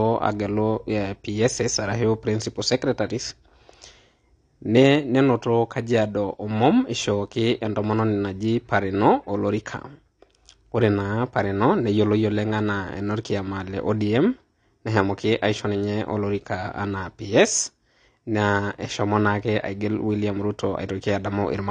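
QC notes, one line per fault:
Throughout: AAC compression, likely AAC-LC at a low bitrate; the muffled, swirly character fits something around 32 kbps. Starved of bits, the encoder has cut everything above 9.7 kHz and quantised the remaining spectrum coarsely. The speech sounds dull and closed-in, consonants lose their edge, and sibilants and held vowels carry a warbling, fizzy texture as bands drop in and out from frame to frame. The damage is plainly audible.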